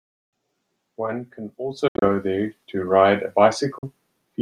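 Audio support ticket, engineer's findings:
Speech, Bluetooth dropout, 1.88–2.08 s: cluster of silent gaps totalling 112 ms over 140 ms, longest 70 ms. Likely wireless link losing packets in transit. Waveform: flat-line holes; spectrogram: blank vertical bands.

Bluetooth dropout, 3.78–3.84 s: 42 ms of silence lost, likely same link fault. Flat segment on waveform, empty column across all frequencies on spectrogram; speech resumes as though it had continued underneath.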